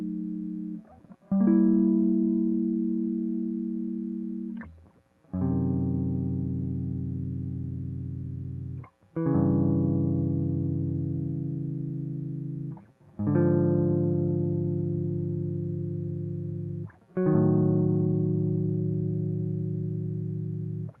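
Nothing goes wrong in this music, which has simply come over a call link whose codec tops out at 12 kHz and leaves its usual coding texture in the sound.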